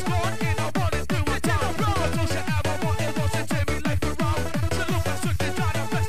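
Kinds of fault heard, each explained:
DC offset: The entire waveform sits shifted off the zero line by a fixed amount, about -28 dBFS, for the whole clip. A constant shift like this has no pitch or rhythm, so the ear cannot hear it as a sound. It still matters. The waveform starts from a raised baseline, so peaks in one direction reach full scale sooner and headroom is lost. On a spectrum it shows as a steady component at 0 Hz, fixed at the very bottom.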